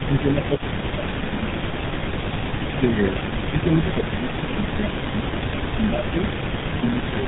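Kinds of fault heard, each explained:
Tandem speech coding: The call passed through GSM full rate coding twice, with a G.711 link between, so each GSM coder reworked already degraded speech. The result sounds rougher and more warbly than one pass, and muffled, with nothing above 3.8 kHz.
Speech suppressed in double talk: Most likely an echo canceller mistook its own talker for loudspeaker echo while both sides spoke, and turned the speech down. The speech dips by up to roughly 15 dB in the first 1.7 s, then by about 10 dB from 2.53 to 6.25 s and again near the end.
Echo leak: Most likely a loudspeaker echo was not fully cancelled at the far end, so part of it was sent back. A faint copy of the speech trails 294 ms behind, about 20 dB down, from 0.14 to 2.74 s and from 3.22 to 7.07 s.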